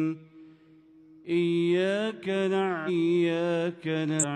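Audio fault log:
2.84–2.90 s and 4.18–4.25 s: damaged data in a compressed stream. Each event is a short chirp or blip of roughly 60 to 70 ms. Part of the compressed data there is corrupt. The decoder cannot read those frames correctly and loses its place in the stream. It outputs garbled audio until it finds the next valid frame header and resynchronises. That brief stretch of misdecoded data is what produces the abrupt, unnatural glitch.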